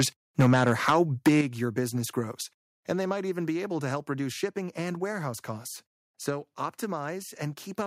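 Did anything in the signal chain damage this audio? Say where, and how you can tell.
Yes. Microphone overload shows at the converter stage, from 0.39 to 0.96 s and from 1.26 to 1.4 s. Peaks run about 9 dB and 8 dB past full scale. Their tops are flattened, so loud syllables crackle. Input gain was likely set too high.

Microphone volume stepped down at the call-processing stage. Level drops abruptly at 0.41 s by about 3 dB, at 1.41 s by about 7 dB, and at 2.43 s by about 3 dB. Voice and background fall together. The software likely reacted to the clipping.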